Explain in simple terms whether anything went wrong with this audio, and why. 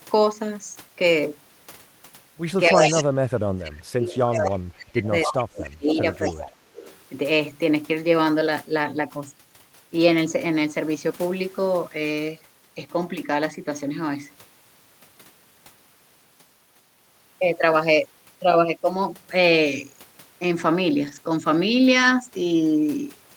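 Yes, three kinds of problem can be heard.

From 2.69 to 6.62 s, the talker's speech keeps dipping sharply, at its worst almost to silence, for about three seconds in total. This is speech suppressed in double talk. The likely cause is that both sides spoke at once, and the echo canceller, unable to tell the talker from the returning loudspeaker sound, turned everything down. Unlike a dropout from the network, the level sinks and recovers in step with the overlap rather than cutting cleanly.

Inside and just after that same stretch, a delayed copy of speech slips through at 2.82–3.02, 4.12–4.5, 5.26–5.32, 5.64–5.69, 6.14–6.32 and 6.74–6.97 s. This is echo leak, likely from the other side's loudspeaker being picked up by its microphone and not fully cancelled. Each scrap trails the original by 265 ms. It is a separate second voice, sometimes nearly as loud as the talker and sometimes faint. 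The suppression only makes the talker quieter.

At 18.95–18.97 s, and again at 21.03–21.17 s, the sound turns briefly rougher and noisier. There is no gap. This is a lost packet rebuilt from error correction. Data went missing, and a lower-quality backup copy carried in the next packet filled in. The second event is longer, which fits several separate packets. Unlike concealment that guesses, the real sound is still there, just coarser.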